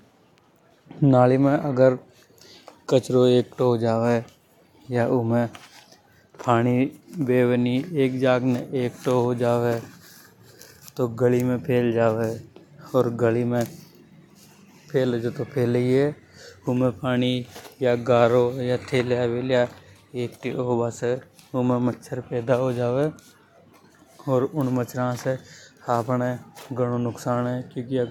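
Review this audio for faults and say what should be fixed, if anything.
Nothing needs fixing: the speech recording holds steady from beginning to end, with no technical fault to be heard anywhere in the signal.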